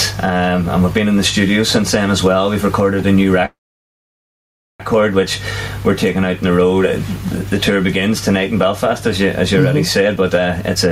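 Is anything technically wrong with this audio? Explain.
Yes. Gain pumping runs through the whole clip. The level is squeezed and released on each loud sound, a swing of roughly 10 dB. This is likely a gain set far too high with a fast limiter pulling it back.

From 3.45 to 4.82 s there is a call audio freeze. The last sound carries on briefly and fades, then about 1.26 s of silence follows. This likely comes from packets held up in transit, leaving the jitter buffer empty. The audio then resumes where it stopped, so nothing is lost but about 1.34 s of delay is added.

From 10.01 s to the end there is a jitter buffer speed-up. The receiver trims short pitch-period pieces again and again, removing roughly 0.3 s. Playback runs at about 133% speed with the pitch unchanged, so the sound feels hurried.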